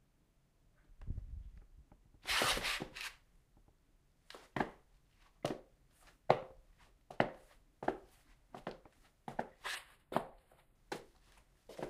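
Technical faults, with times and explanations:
9.75 to 10.75 s, channel delay (comb filtering): one channel lags by roughly four samples, so summing cuts a fixed notch near 7 kHz, not a smooth low-pass roll-off.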